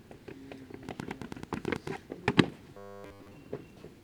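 A recording of everyday sound carries a train of clicks from 0.89 to 1.88 s: about ten sharp, similar pulses at a regular 9.1 per second, peaking roughly 15 dB above the surrounding sound. Likely interference from nearby equipment or a faulty connection or power supply is the cause. On a spectrogram they show as evenly spaced thin vertical lines, and on the waveform as narrow spikes. From 2.74 to 3.33 s the sound turns into a rigid metallic buzz, robotic sound from repeated short buffers. It most likely comes from the software filling gaps by looping the last stretch of audio while most of the real audio is skipped. The 100 Hz buzz fits a 10 ms repeated segment. A spectrogram shows flat harmonic lines at multiples of 100 Hz, and the waveform shows near-identical 10 ms cycles.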